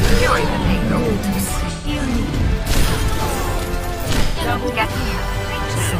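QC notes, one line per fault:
1.71–1.88 s and 4.23–4.40 s: AAC frame loss with concealment. The decoder smears the last good spectrum across each gap, so it sounds phasey and noisy rather than silent or clicking.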